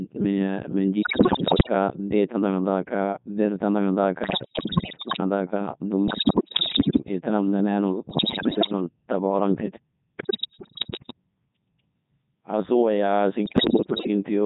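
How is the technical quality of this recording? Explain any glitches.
Technical quality is poor. The whole recording has passed through a very low-rate digital voice codec, and six bursts of transmission errors damage it further.

Codec 2 vocoder (throughout): The speech sounds robotic and buzzy, which fits Codec 2 at its 3.2 kbit/s mode. Only pitch, voicing, energy and a coarse spectral envelope survive. The decoder rebuilds everything from sine waves, so the original waveform is gone and the damage is heavy. On a spectrogram, harmonics appear as unnaturally regular stripes under a smeared, blocky envelope. The waveform looks synthetic, lacking natural phase detail.

Bit errors on digital voice radio (1.02–1.74 s, 4.24–5.20 s, 6.08–7.04 s, 8.10–8.72 s, 10.18–11.13 s, 13.46–14.08 s): Corrupted bits, roughly one in seven to one in ten, reach the decoder. Every bit in such a sparse stream controls pitch, level, voicing or spectral shape for a whole frame. 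The voice lurches in pitch and loudness and dissolves into bleeps, warbles and gibberish. Spectrograms show harmonic stripes jumping abruptly between frames. The waveform shows erratic level steps.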